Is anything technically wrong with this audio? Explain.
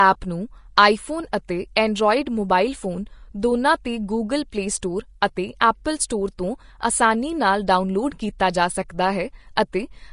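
Yes. All the way through the speech, nothing reaches above 10.6 kHz, and the remaining treble sounds plainly grainy and hissy. That's likely Vorbis compression at roughly 34 kbps, which cuts the top band and quantises the high detail so coarsely it becomes noise.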